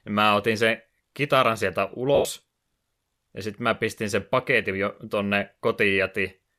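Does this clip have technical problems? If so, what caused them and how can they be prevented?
Yes. Lost LE Audio frames after "otin sen kitaran sieltä", 2.15 to 2.25 s: a 100 ms gap, consistent with about ten 10 ms frames, concealed as a fading noisy smear. Prevent it with a stronger radio link and fewer obstructions.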